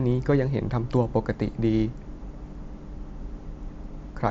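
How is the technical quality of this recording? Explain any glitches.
No faults or glitches here.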